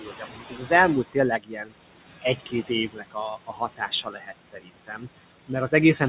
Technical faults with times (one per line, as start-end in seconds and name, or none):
0.00-6.08 noise suppressor artifacts
0.00-0.71 speech cut by the noise suppressor
1.38-1.73 speech cut by the noise suppressor
2.22-3.17 speech cut by the noise suppressor
3.47-5.03 speech cut by the noise suppressor